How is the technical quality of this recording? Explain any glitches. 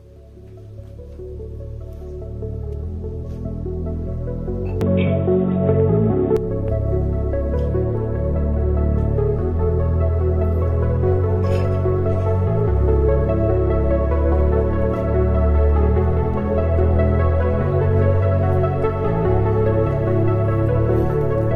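The recording has one clear glitch. From 4.81 to 6.37 s the sound turns dull and boxy, likely an input switched to a poorer device. The band stops near 3.8 kHz, the level shifts about 5 dB, and a faint new noise floor appears. A spectrogram shows the top abruptly cut off.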